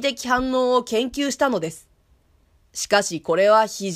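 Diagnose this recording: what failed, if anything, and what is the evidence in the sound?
Nothing failed in this recording, and there is no evidence in the sound of any fault at any stage.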